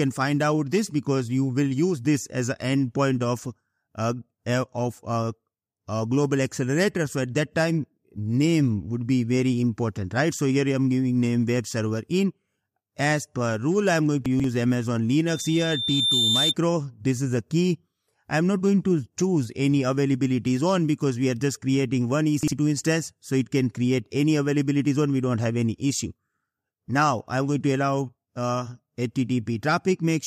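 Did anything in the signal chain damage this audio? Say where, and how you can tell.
Yes. Around 14.26 to 14.44 s and again at 22.43 to 22.52 s, chunks out of order: a short stretch of roughly 46 ms blocks plays jumbled, with hard joins. This is a buffer or network stage writing a block late. Nothing goes missing, which separates it from dropouts.

From 15.27 to 16.55 s there is a loudspeaker feedback squeal. A single 3.6 kHz tone swells over about a second until it sits about 5 dB above the programme. That points to an acoustic loop at the playback and microphone stage. Its steady pitch and gradual build set it apart from electrical hum or whine.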